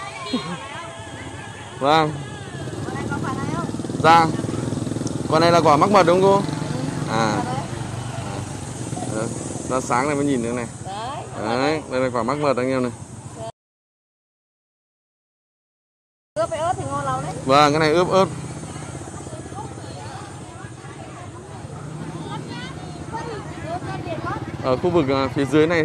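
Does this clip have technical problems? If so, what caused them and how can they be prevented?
Yes. At 13.50 s the sound cuts off abruptly into dead digital silence with no room tone, then resumes mid-flow at 16.36 s, losing 2.86 s. This audio dropout to silence likely came from a lost input while the recorder kept writing silence. Secure connections and live input monitoring would prevent it.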